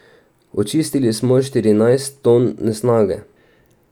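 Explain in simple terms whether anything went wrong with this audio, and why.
Nothing went wrong here; the recording sounds just as it should the whole way, with nothing that needs fixing.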